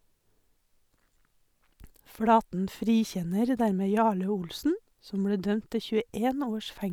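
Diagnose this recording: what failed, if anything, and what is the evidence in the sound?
Nothing failed: no stage in the chain, from capture through to playback, leaves an audible fault anywhere in this speech recording.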